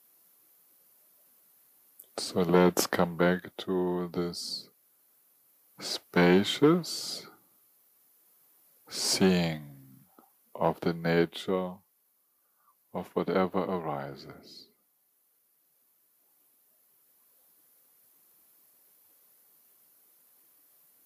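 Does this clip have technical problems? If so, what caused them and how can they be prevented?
No, there are no technical problems to report here.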